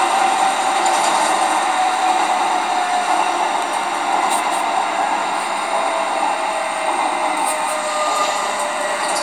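From start to finish there's a doubled audio track: a second full-band copy trails the original by about a fifth of a second, a few dB quieter, with no decay or room colour. It's likely a second, slower capture path mixed back in.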